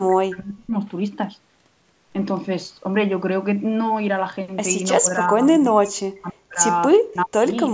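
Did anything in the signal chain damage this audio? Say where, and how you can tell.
Yes, it's in call processing: the speech drops by around 40 dB at 0.07–0.74, 5.01–6.62 and 6.97–7.47 s, likely the echo canceller suppressing speech in double talk.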